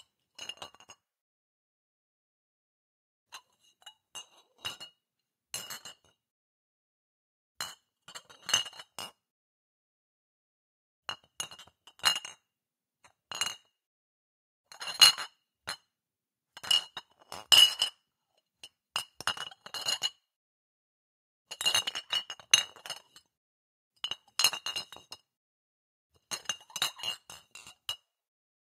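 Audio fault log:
No faults heard in this recording of sounds.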